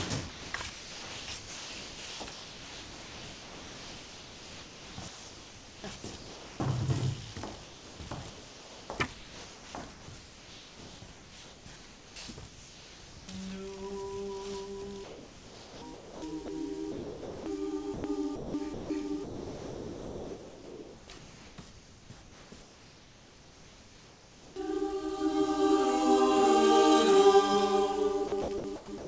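From 0.30 to 6.60 s the sound is chopped, most likely by the voice detector. It keeps flipping between sending and not, so soft edges drop out and are filled with a synthetic hiss.

From 7.64 to 13.28 s, comfort noise likely replaces the background. For about 4.3 s of that stretch nothing real gets through, and a flat, featureless noise fills the gap instead of the actual room.

The same chopping, likely from the voice detector, comes back at 15.04 to 24.56 s and again at 28.28 s through the end, with the same choppy texture. Throughout, nothing above 8 kHz comes through, which fits a G.722 call path.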